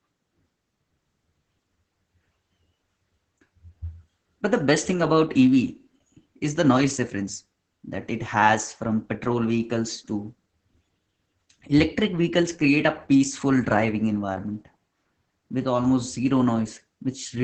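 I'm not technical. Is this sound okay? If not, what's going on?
No. The whole recording went through heavy Opus voice compression. To squeeze the speech into a very small data stream, the coder rebuilt it from a rough model of the voice and threw away all the high end, so nothing above about 9 kHz survives. From start to finish the speech sounds muffled and a little hoarse, with a slightly robotic, buzzy edge, as if heard over a poor internet call.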